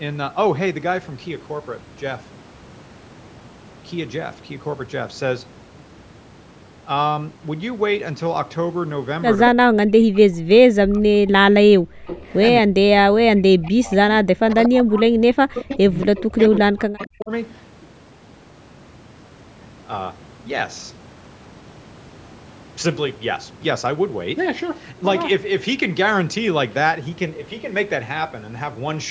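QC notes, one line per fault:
9.5–11.62 s and 12.61–17.31 s, speech suppressed in double talk: the voice dips by roughly 40 dB in patches while the far side talks, likely the canceller ducking both.
11.9–12.06 s, background gated by the echo canceller: room sound drops out hard, about 40 dB, for a brief moment while the loudspeaker side plays, then returns.
12.06–12.38, 13.37–13.42, 14.5–15.0 and 15.54–16.06 s, echo leak: a 231 ms delayed copy comes back, faint near 13.4 s, about 10 dB under speech at its loudest, likely uncancelled loudspeaker pickup.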